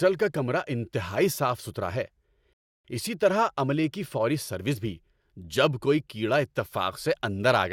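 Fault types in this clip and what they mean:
Rebuffering stall: The player used up its downloaded audio and had to wait for more to arrive. In this speech, the sound cuts to silence at about 2.53 s, right after "انتہائی صاف ستھرا ہے". The gap lasts about 0.31 s. Playback then picks up exactly where it left off, with "اسی طرح عملے کی". No sound is skipped or repeated. The pause simply adds time to the clip.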